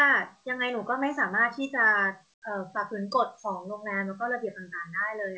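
Comfort noise in place of the background appears from 2.34 to 2.42 s: for 80 ms the real background drops out, replaced by a steady, featureless hiss about 19 dB quieter. The likely cause is discontinuous transmission: with no speech detected, the sender paused and the receiver synthesised filler noise, heard through a G.722 path with nothing above 8 kHz.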